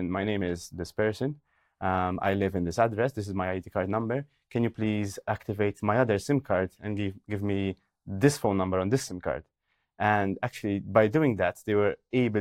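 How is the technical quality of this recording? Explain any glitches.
Listening through the recording, nothing stood out as a technical problem or glitch.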